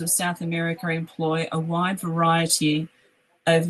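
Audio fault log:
0.38–3.70 s, automatic gain rising: the gain control judged the input too quiet and steadily raised its gain, so speech and background swell together to the end.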